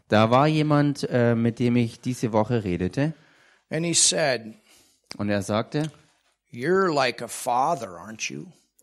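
No technical faults are audible.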